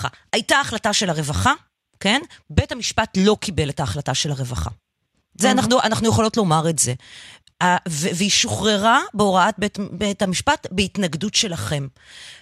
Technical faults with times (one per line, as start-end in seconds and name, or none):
none